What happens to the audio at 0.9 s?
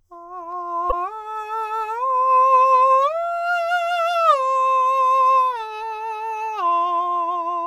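From 0.88 to 0.93 s the music breaks up briefly, caused by damaged data in the compressed stream. Corrupted bytes in that stretch cause the decoder to misread the affected frames and lose sync until it locks onto the next valid frame header.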